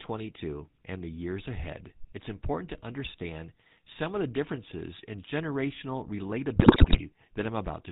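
From start to finish, the speech carries the sound of the GSM full-rate codec, and the damage is plainly audible. Nothing above 4 kHz gets through. The codec rebuilds the voice from a vocal tract model driven by regular pulses. Only every third excitation sample is kept. That thinning gives the voice its buzzy, gravelly roughness. The character fits the 13 kbps full-rate coder.

From 6.56 to 7.00 s, just after "the differences in generational", GSM bit errors break in. Corrupted bits reach the decoder. Wrong filter, pitch or gain values bend the spectrum or throw the level off, one frame after another. The voice turns to squawks, pops and gargling. The stretch lasts about 0.44 s, which fits roughly 22 coded frames. The amount of damage points to an error rate of around 8 percent.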